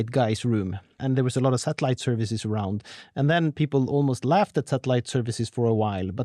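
No technical faults are audible.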